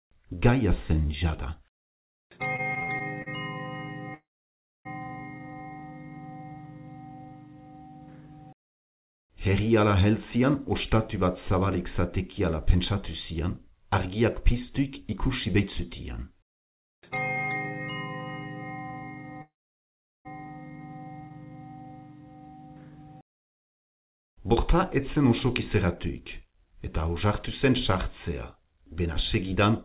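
From 2.56 to 3.28 s there are repeated stalls (stutter): the jitter buffer kept running dry, so six short holds, the longest 59 ms, make the sound drag and hiccup.

At 4.14 to 4.87 s and 19.42 to 20.27 s come call audio freezes, likely from delayed packets. Each is a brief buzz or hiss fading into roughly 0.6 to 0.8 s of silence before the sound resumes where it stopped.

Jitter buffer speed-up runs from 10.36 to 17.37 s and again from 24.18 to 26.48 s. The receiver trims pitch-period slivers to shed built-up delay, about 300 ms in the first stretch and a few tens of ms in the second. Both play at 103% speed with unchanged pitch.

Throughout, the narrowband call codec leaves nothing above 4 kHz.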